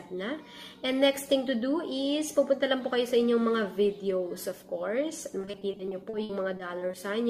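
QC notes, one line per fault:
5.41–6.95 s, repeated packet loss (robotic sound): choppy stretch with pieces missing. Over a dozen short holes, the longest 60 ms, were each patched by stretching the preceding sound, so about 340 ms, roughly a fifth of the span, is synthetic fill.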